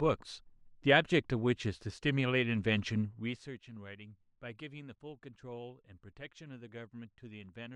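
There are no technical faults to describe in this speech clip.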